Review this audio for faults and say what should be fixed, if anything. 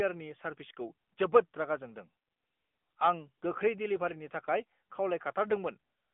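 AMR narrowband mobile codec, throughout: nothing passes above 3.6 kHz, and the pulse-driven vocal-tract model leaves plainly audible buzz on the speech, consistent with a mode near 10 kbps. To prevent it, record directly or route the call over a wideband path instead of the narrowband mobile link.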